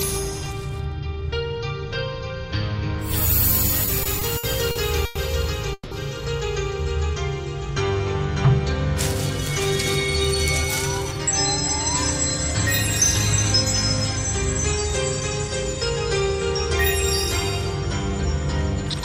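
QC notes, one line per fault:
3.85–5.17 s, repeated stalls (stutter): The sound catches and drags six times in this stretch, each time holding on to what was just heard instead of moving on. The longest hold is 100 ms, and about 260 ms is stretched out in total, around a fifth of the span. Packets kept arriving late, so the jitter buffer repeatedly ran dry and the receiver extended the last sound until data caught up. Nothing is lost, but the timing stumbles.
5.73–5.93 s, call audio freeze: The sound stops moving forward and hangs as a fading continuation of the last moment, trailing into about 40 ms of silence before picking up again where it left off. Roughly 180 ms is bridged this way, and the audio afterwards runs about 180 ms later than before. This is likely a network hold-up that emptied the jitter buffer. The receiver padded the wait rather than dropping anything, so the result is an inserted gap and not missing sound.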